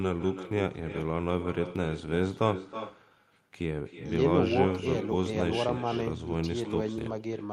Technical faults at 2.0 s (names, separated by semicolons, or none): echo with no canceller